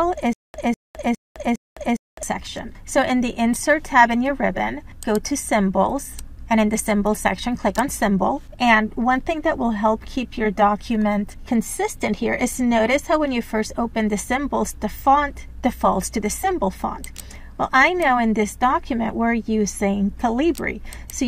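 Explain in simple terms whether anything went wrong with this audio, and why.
From 0.33 to 2.23 s there's a stutter with silent gaps: a 0.2 s snippet repeats four times with dead silence between. That's likely a stalled player, and the missing audio is lost.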